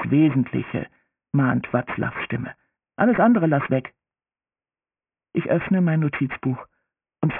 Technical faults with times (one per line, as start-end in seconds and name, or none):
0.00-7.39 aliasing